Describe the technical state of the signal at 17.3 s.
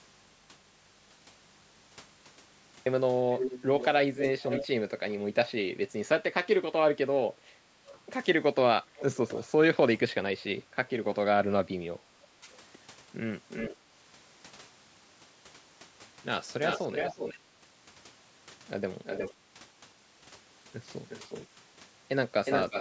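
An echo canceller on a loudspeaker end likely let part of the far voice back through, so from 16.64 to 17.39 s an echo leak repeats the speech about 361 ms late, about 5 dB quieter.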